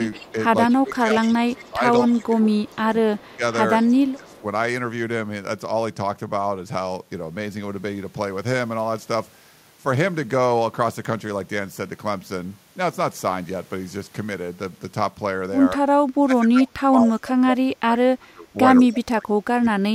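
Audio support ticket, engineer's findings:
Echo leak: faint delayed copy of the speech, trailing by 199 ms, about 25 to 30 dB under the direct signal, at 0.12–3.36 s, 3.91–4.42 s and briefly at 18.78–18.82 s. Likely far-end echo canceller passing residual loudspeaker pickup back down the line.

Speech suppressed in double talk: talker level dips and breaks up at 0.33–4.34 s (deepest about 20 dB) and 16.23 s to end (about 30 dB), roughly 3 s affected each. Likely echo canceller attenuating near-end speech while both sides talk.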